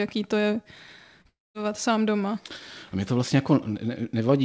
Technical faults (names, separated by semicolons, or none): short concealed packet loss; long network dropout